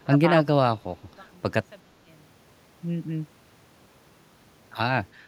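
From 0.03 to 0.29 s the speech dips in patches by roughly 20 dB, about 150 ms in total. This is likely speech suppressed in double talk: with both ends talking at once, an echo canceller turns down its own talker along with the loudspeaker echo.

From 0.42 to 2.49 s the level falls by about 26 dB and the sound turns faint, likely from one channel inverted. Reversed polarity on one side cancels the centred speech in a mono sum, leaving only the small difference between channels.

Within that stretch, two shorter suppression dips of around 10 dB occur at 0.81 to 0.85 s and 1.04 to 1.09 s, again likely caused by double-talk gating.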